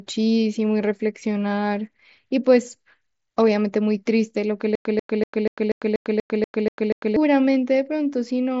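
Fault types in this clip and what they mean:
Stutter with silent gaps: From 4.75 s to 7.16 s the speech stops moving forward. A fragment about 140 ms long plays, then about 100 ms of dead digital silence follows. This cycle repeats ten times at a steady 241 ms period. The pattern points to a player or stream that stalled and likely replayed its last buffered fragment at each retry. The speech due in that span never arrives. The band-limited mSBC headset sound, with nothing above 7.7 kHz, carries through each repeat.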